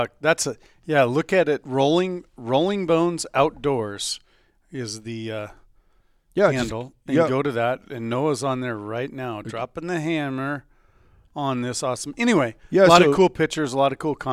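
No technical faults can be heard anywhere in the recording.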